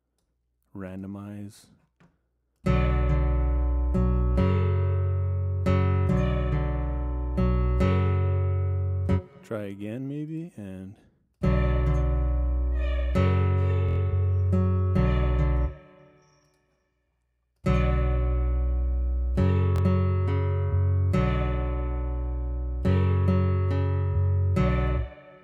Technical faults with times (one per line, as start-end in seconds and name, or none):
13.89-13.98 repeated buffer
19.76-19.81 repeated buffer